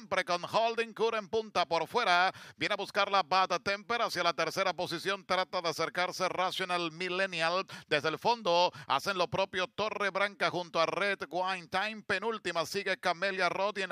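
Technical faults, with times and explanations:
No technical faults can be heard anywhere in this clip.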